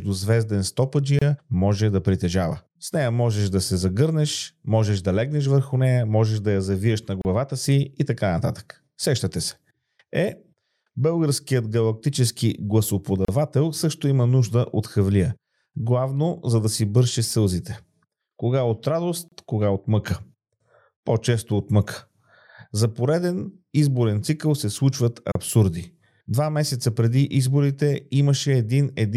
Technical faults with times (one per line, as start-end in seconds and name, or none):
1.19-1.22 gap at a join of encoded pieces
7.22-7.25 gap at a join of encoded pieces
13.25-13.28 gap at a join of encoded pieces
19.28-19.32 gap at a join of encoded pieces
25.32-25.35 gap at a join of encoded pieces